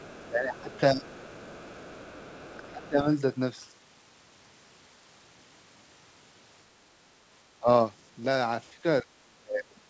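A speech recording in which a faint second voice runs underneath the talker from 0.0 to 2.89 s, sitting roughly 25 dB below the main speech. This is other side's voice leaking through, likely residual loudspeaker echo the canceller failed to remove. On a spectrogram it appears as a weak, separate set of harmonic traces interleaved with the talker's stronger ones. In the waveform it fills the gaps between phrases with low-level activity instead of silence.

The talker's own level also sinks in four places: 0.24 to 1.11 s (about 0.7 s affected in total), 2.67 to 3.07 s (about 0.3 s), briefly at 7.59 to 7.68 s, and from 8.76 s to the end. The first three drops are around 20 dB and the last is around 35 dB. This pattern is speech suppressed in double talk, most likely the echo canceller ducking both sides at once. The waveform envelope shows abrupt dents or near-gaps at those times, and the spectrogram shows the harmonics fading or breaking into patches.

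Across the whole clip, nothing appears above 8 kHz, which fits a wideband call codec.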